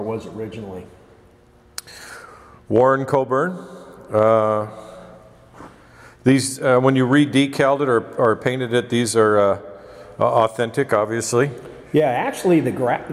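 Nothing stood out as a technical problem on listening to this audio.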